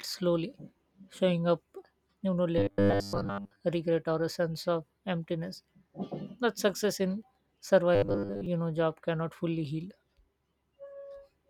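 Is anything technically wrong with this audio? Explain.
Yes. Robotic sound from repeated short buffers occurs from 2.58 to 3.61 s, between "you know" and "regret or a sense", and from 7.95 to 8.46 s, just before "know job cannot fully". Audio likely arrived too seldom, so a roughly 10 ms fragment kept replaying over most of each span. This imposed a rigid, metallic 100 Hz buzz. A spectrogram shows evenly spaced 100 Hz harmonic stripes, and the waveform shows an identical short cycle tiling.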